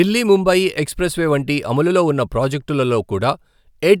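No technical fault can be heard anywhere in the speech recording; the signal stays intact and continuous throughout.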